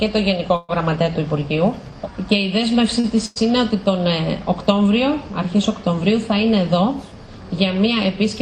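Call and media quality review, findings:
Call audio freeze, 0.56–0.71 s: sound hangs and fades for about 128 ms, then resumes where it stopped, nothing lost. Likely jitter buffer ran dry on held-up packets.

Short stall from a late packet, 3.00–3.06 s and 3.26–3.38 s: last sound stretched for 38 ms, then 100 ms. Jitter buffer underrun, receiver holding until arrival.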